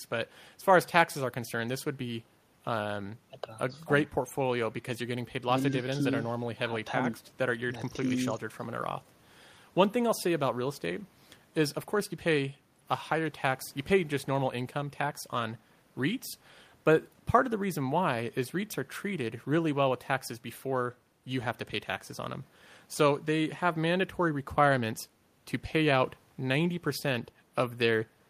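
No technical faults are audible.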